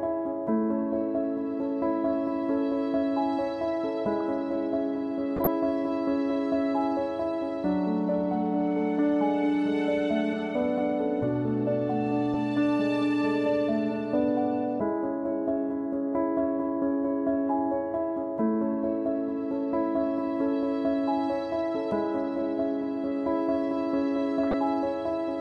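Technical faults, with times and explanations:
5.36–5.47 s and 24.43–24.54 s: corrupt frame decoded. Each time, a short burst of misplaced energy, peaking around -10 dBFS, lasts about 0.1 s, spanning a few compressed frames. Bit errors in those frames corrupted gains and spectral codes, which the decoder still played, putting energy at the wrong frequencies.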